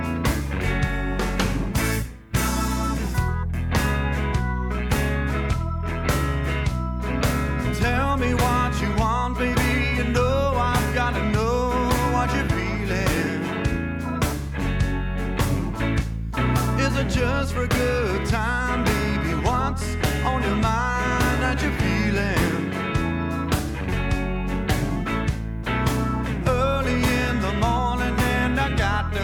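A single sharp click sounds at 22.19 s, a brief tick that stands apart from the surrounding sound and would show in a spectrogram as a thin vertical line spanning all frequencies. The likely cause is dropped samples: a tiny fraction of a millisecond of the stream went missing, so the waveform jumps abruptly from one value to a later one. That gap is far too short to remove anything audible, leaving only the click from the discontinuity.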